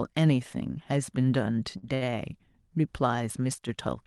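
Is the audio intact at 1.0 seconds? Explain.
Yes, the speech at 1.0 seconds is intact, with nothing disturbing it beyond the ordinary coding of the call path it travelled through.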